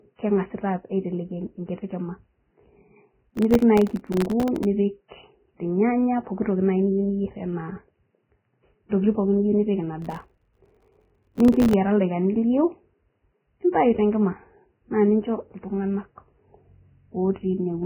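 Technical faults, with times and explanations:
Throughout: Vorbis compression. The speech sounds hissy and grainy, dull and band-limited, with nothing above 3.1 kHz, rough vowel tones and softened consonant attacks. The cause is likely heavy Vorbis coding at a very low rate, roughly 9 kbps. To fit that budget the encoder drops the top band entirely and quantises the remaining upper detail so coarsely that it turns into noise of similar energy laid over the smooth spectral envelope.
3.27–4.65 s and 10.02–11.74 s: processor overload crackle. Both stretches carry a dense gritty tearing that rides on the speech and stops cleanly when each ends. The texture fits audio buffers of about 1.5 ms repeatedly missing their deadline, on the order of seventy misses in the first burst and a hundred in the second. Each missed buffer leaves a hard-edged gap of silence, and so many tiny dropouts in a row fuse into crackle.
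8.89–8.92 s and 13.73 s: pre-echo. A short hiss smears in just ahead of a sharp onset, for about 27 ms at the first and about 19 ms at the second, and each attack sounds soft rather than crisp. The attack sits late in a transform block. Quantisation noise sized for the loud part is spread across the whole block, so it also fills the quiet moment before the onset, where nothing masks it.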